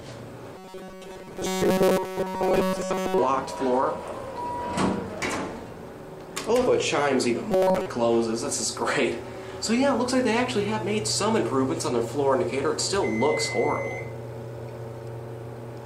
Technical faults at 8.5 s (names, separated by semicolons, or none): none